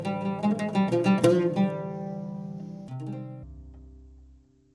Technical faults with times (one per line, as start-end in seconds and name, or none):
3.43-4.74 wrong sample rate